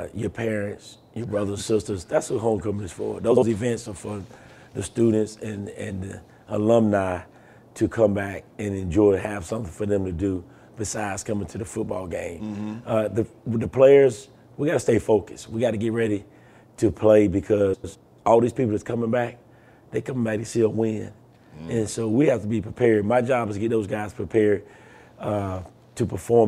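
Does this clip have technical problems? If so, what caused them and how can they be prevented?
Yes. A brief garbled flutter appears at 3.31–3.43 s and 17.74–17.95 s. These are frames out of order: two adjacent blocks, about 52 ms and 105 ms, played in swapped order. Preserving packet sequence numbers and reordering before decoding prevents it.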